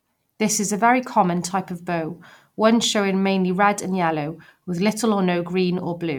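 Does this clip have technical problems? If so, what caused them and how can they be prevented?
No, there's nothing wrong with this speech recording on the technical side, so there's nothing to trace back or guard against.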